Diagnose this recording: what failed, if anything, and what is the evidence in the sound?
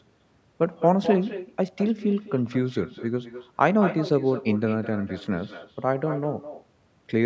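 The failure is an echo with no canceller, at the call-processing stage on the far end, and it runs through the whole speech clip. Every phrase returns about a fifth of a second later as a copy about 12 dB quieter and thinner. The far loudspeaker feeds its microphone and nothing subtracts it. On a spectrogram each syllable has a fainter duplicate shifted right, still band-limited below 8 kHz like the direct speech; the waveform shows smaller trailing bursts.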